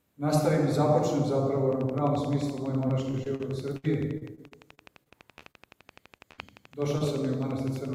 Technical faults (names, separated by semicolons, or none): train of clicks; repeated packet loss (robotic sound); short concealed packet loss; burst of packet loss